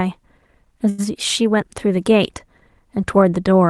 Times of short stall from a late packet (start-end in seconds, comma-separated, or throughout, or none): 0.89-1.00